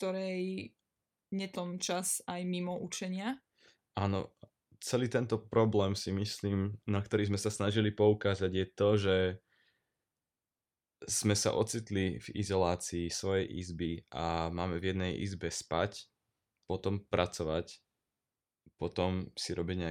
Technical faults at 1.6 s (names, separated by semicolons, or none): skip ahead; jitter buffer speed-up